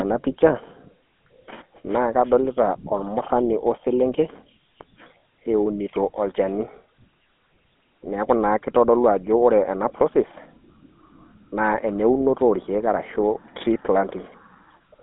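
GSM full-rate codec damage runs through the whole of this speech recording. The voice has been squeezed into a phone line band of roughly 200 Hz to 3.4 kHz, with nothing at all above 3.8 kHz. The codec rebuilds the sound from a vocal-tract model excited by a sparse, regularly spaced pulse train. That gives the plainly audible buzzy, gravelly roughness, consistent with 13 kbps coding.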